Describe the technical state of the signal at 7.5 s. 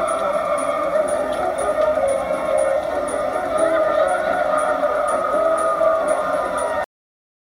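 At 7.5 s the signal is flat digital silence. This is a cut-off end. The sound stops abruptly at 6.84 s and stays silent through 7.50 s. The final buffers were never written or played out, so the audio ends in the middle of a sound. There is no natural decay or fade. The level drops straight from active sound to silence, and the last 0.66 s carries nothing at all.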